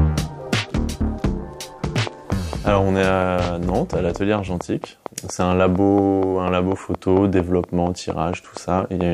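A train of clicks runs from 1.84 s to 9.02 s. Regular ticks come about 4.3 times per second, around 30 in all, well above the sound. Likely cause: interference or a faulty connection or power supply.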